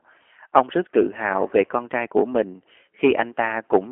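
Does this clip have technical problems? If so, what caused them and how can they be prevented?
Yes. The speech passed through a narrowband G.729 codec (the G.729A variant), which fits an 8 kbit/s VoIP link. Rather than storing the waveform, it rebuilds each 10 ms frame from a vocal tract filter, a pitch predictor and a few pulses, and the line carries only about 300 Hz to 3.4 kHz, with nothing above 3.6 kHz. Throughout the clip the speech sounds muffled, plainly rough and synthetic. Using a wideband codec such as G.722 or Opus, with enough bitrate, would prevent it.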